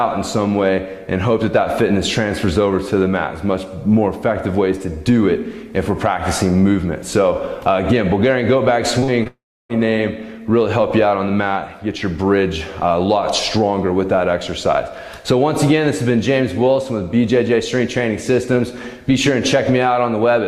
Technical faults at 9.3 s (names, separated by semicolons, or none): short concealed packet loss; long network dropout